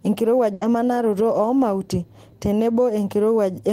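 At 0.53 s a burst of packet loss hits the speech. The last sound is held and faded out for about 80 ms, then the speech resumes at "emanaroto oo mauti" with about 80 ms skipped. Unlike a silent dropout, the gap is filled rather than empty.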